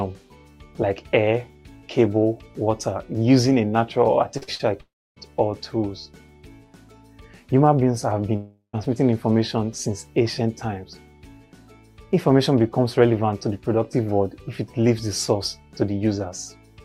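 Between 4.37 and 4.61 s, three short concealed packet losses occur close together: 4.37 to 4.43 s, 4.43 to 4.49 s, and 4.55 to 4.61 s. In each, about 40 ms of audio failed to reach the decoder in time. The receiver filled each gap by extending the preceding sound and then blending back into the real signal. The first two run back to back, so roughly 80 ms is synthesized in one stretch. This produces a brief smeared wobble, followed by a second brief smear just after.

At 4.81 to 5.18 s, and again at 8.36 to 8.75 s, the gaps are far longer, and the likely cause is a long network dropout. The sound does not cut off abruptly. The last moment carries on as a fading buzz or hiss before giving way to silence, which lasts about 0.28 s in the first gap and about 0.12 s in the second. Audio then resumes, but about 0.36 s and 0.38 s respectively of the original is missing rather than delayed.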